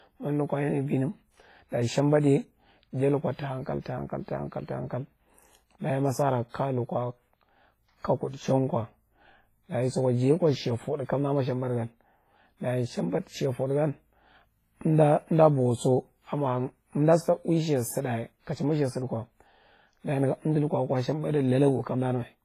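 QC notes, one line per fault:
throughout, WMA compression: heavily ringing, washy speech, hiss breathing with the signal, nothing above 15.4 kHz; likely a low-bitrate WMA encode, fitting roughly 24 kbps.
6.49–6.54 s, pre-echo: after "dayi ma sara", a 50 ms hiss precedes the attack before "kaya lukwa", as block-wide quantisation noise fills the quiet gap, smearing the onset.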